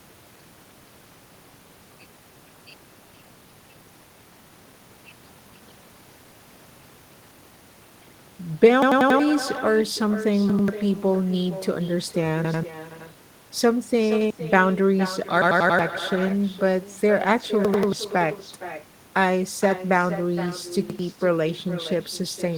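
From the start and for the whole speech clip, each phrase is followed about half a second later by a quieter, thinner copy sitting around 12 dB below it. This is echo with no canceller: the far end plays the call through a loudspeaker, its microphone picks it up, and the sound returns after the network round trip. Unlike room reverberation, the copy is a distinct delayed repeat rather than a smooth tail blended into each sound.

Repeated buffer faults begin at 8.82 to 9.20 s and recur at 10.50 to 10.68, 12.45 to 12.63, 14.12 to 14.30, 15.42 to 15.79, 17.65 to 17.93 and 20.90 to 20.99 s. Each time, new audio arrived late, so the same chunk of about 93 ms played again, one to four extra times, which fits a 4096-sample buffer. The result is a mechanical stutter with hard joins. It stands apart from echo because it repeats a fragment at full level and replaces up to about 0.4 s of new sound.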